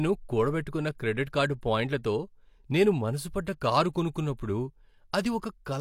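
At 1.61 s a short burst of pre-echo appears: a hiss lasting about 17 ms arrives just ahead of a sharp attack in the speech. The codec's quantisation noise, sized for the loud onset, has spread back across the quiet moment before it, softening the attack.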